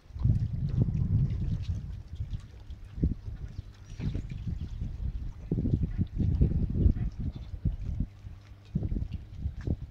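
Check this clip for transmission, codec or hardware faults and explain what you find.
One fault is present: mains hum from 1.91 s through to the end of the clip. Power-line energy is leaking into the signal path, most likely through a ground loop or a transformer sitting close to the cabling or electronics. It shows up as a steady low drone at 50 Hz, accompanied by a few low harmonics. It sits at around 20 dB below the wanted sound.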